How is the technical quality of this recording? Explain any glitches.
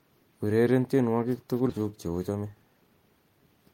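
The recording has two playback-timing glitches, both close together in the middle of the speech.

From 1.69 to 1.79 s, the speech jumps forward abruptly, losing roughly a fifth of a second with almost no gap at the join. This is a skip ahead: a stretch of audio was discarded while later packets were already queued, and the two sides were spliced nearly directly.

Between 2.29 and 2.65 s, the speech sounds briefly hurried, running at about 113% speed with its pitch unchanged. This is a jitter buffer speed-up: the buffer was holding more audio than its target, so the receiver trimmed short pitch-period-sized pieces in succession, removing around 50 ms in total.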